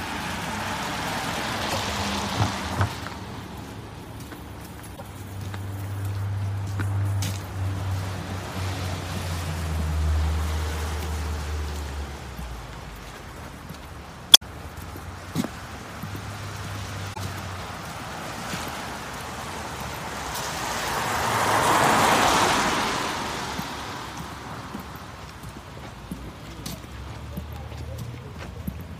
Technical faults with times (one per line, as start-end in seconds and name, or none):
1.66-1.75 damaged data in a compressed stream
4.93-5.02 damaged data in a compressed stream
14.33-14.42 damaged data in a compressed stream
17.12-17.18 damaged data in a compressed stream